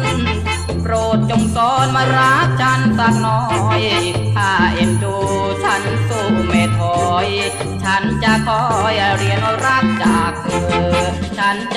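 Throughout the clip, a filter restarted on every block produces a buzz at 21.5 Hz. Each block starts from silence, which fits a 2048-sample block, so a small transient repeats and tracks the sound's level. A spectrogram shows evenly spaced thin vertical lines, and the waveform shows tiny steps at each block boundary.

From 8.59 to 9.98 s, a train of clicks ticks over the sound, likely from interference or a faulty connection. There are about fifteen similar pulses at an irregular pace, averaging 8.71 per second and peaking about 10 dB above the signal. They appear as sharp spikes in the waveform and as broadband vertical streaks on a spectrogram.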